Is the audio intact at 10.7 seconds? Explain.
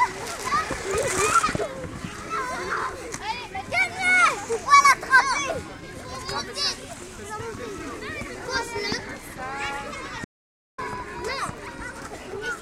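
No. At 10.7 seconds the sound has vanished into dead digital silence, with no room tone, in a gap running from about 10.25 to 10.78 s, roughly 0.54 s of lost audio. This is an audio dropout to silence, likely from the input briefly disconnecting while recording continued writing zeros.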